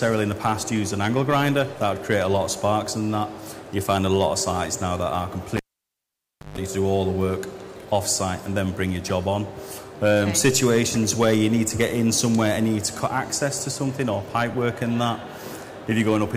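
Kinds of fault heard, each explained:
Cable pulled and plugged in, 5.57 to 6.58 s: a live lead is yanked out with a pop, leaving near silence for about 960 ms, then a 141 ms burst of 50 Hz mains buzz while only the tip makes contact, before a second pop restores the sound.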